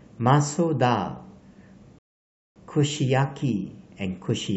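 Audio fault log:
1.99 to 2.56 s, rebuffering stall: the speech just drops out to dead silence for about 0.57 s, then carries on from exactly the point where it broke off, with nothing skipped. That's the player running dry of downloaded audio and sitting idle until the next chunk shows up. Because playback simply pauses rather than jumping ahead, no speech goes missing, but the clip ends up that half-second longer than it should be.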